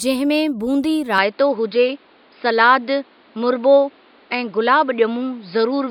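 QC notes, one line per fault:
1.18 s to end, input switched to a poorer device: straight after "में बूंदी" the speech loses its upper frequencies and turns duller, with a faint new background noise well below the voice. There is no gap at the change and the loudness stays about the same. The likely cause is a different microphone taking over mid-recording. Unlike a plain filter or codec bandwidth drop, this change also brings its own tone and noise floor.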